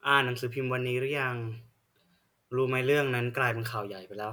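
Nothing is technically wrong with this speech recording.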